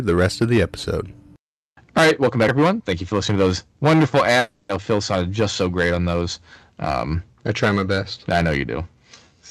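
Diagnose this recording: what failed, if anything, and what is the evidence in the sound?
The speech has hard clipping all the way through, overdriven by about 15 dB somewhere before or at conversion, so roughly one sample in twenty gets its peak sliced flat. Those flat tops throw off high harmonics, and you hear it as harsh fuzz on every loud syllable.

At 4.39 to 4.71 s the sound smears into a fading buzz for about 0.3 s, then the speech picks up further along with that stretch gone. That's most likely a long network dropout, where the receiver stretched the last audio to cover the missing packets.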